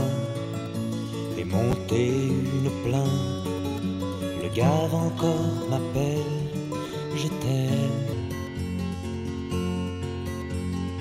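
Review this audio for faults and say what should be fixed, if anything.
Chunks out of order at 1.71 to 1.73 s and 6.87 to 6.90 s: blocks of about 10.7 ms play one and two blocks late, leaving jumbled joins.

Section at the wrong speed from 8.13 s to the end: playback runs at 0.80 times speed, roughly four semitones low, likely from audio fitted to the wrong clock rate.

To prevent both, enforce strict sequence ordering of buffers before writing and verify that every section uses the same sample-rate clock throughout the chain.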